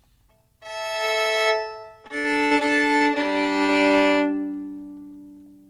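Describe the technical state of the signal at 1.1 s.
At 1.1 s the signal is intact, with no audible fault at that point in the sound.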